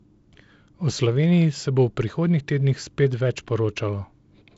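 No faults can be heard.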